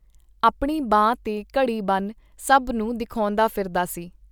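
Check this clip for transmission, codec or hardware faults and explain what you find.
No faults found in this clip.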